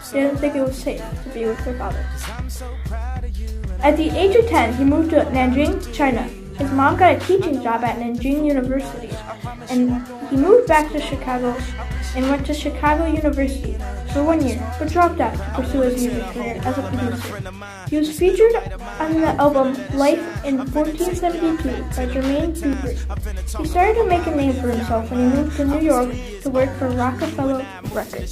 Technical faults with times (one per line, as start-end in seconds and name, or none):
21.73-26.74 periodic USB or driver dropouts